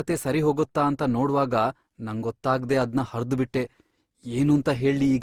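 Throughout, the speech sounds swirly, smeared and hollow, with blurred attacks. This is generation loss, likely from repeated Opus re-encoding, about five passes, at what sounds like 48 kbit/s.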